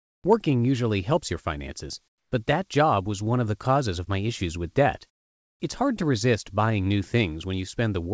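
From 0.0 to 0.24 s the background is replaced by comfort noise, flat and featureless and about 20 dB quieter, likely from discontinuous transmission. Unlike a simple level dip, the texture itself changes. Between 0.22 and 0.24 s the first sound is an onset clipped by the voice detector: it begins abruptly with no soft attack, the missing 20 ms likely filled with that same comfort noise rather than silence. The same smooth noise takes over again from 2.08 to 2.32 s, between "usually helps your finances" and "but that job was", about 16 dB below the real background. It returns from 5.10 to 5.60 s, after "my issues with debt", about 19 dB lower. Throughout, nothing sounds above 8 kHz, which fits a G.722 call codec.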